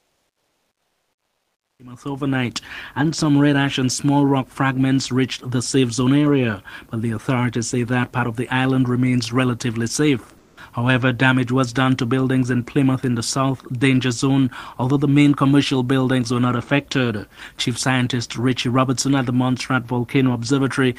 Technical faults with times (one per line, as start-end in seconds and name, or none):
0.00-1.79 comfort noise in place of the background
1.75-1.79 onset clipped by the voice detector
10.39-10.55 sound dropped by the voice detector